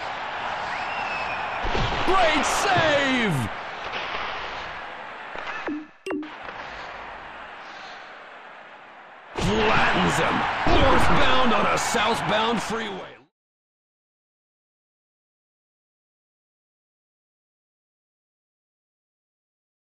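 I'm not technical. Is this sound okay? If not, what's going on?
Yes, nothing is technically wrong with this sound; the only change you'll hear is a deliberate smooth fade-out that begins around 12.5 s and reaches silence at 13.33 s, the way an editor would gently end a recording.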